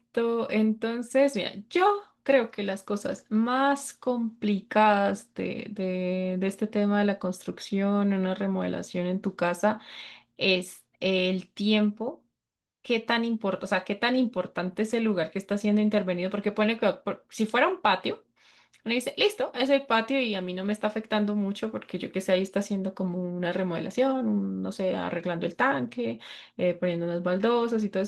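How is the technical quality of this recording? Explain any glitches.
No glitches to point out here: the speech comes through fine, with just the light touch you'd expect from Opus voice compression running in its hybrid fullband mode at a rate that fits about 20 kbps.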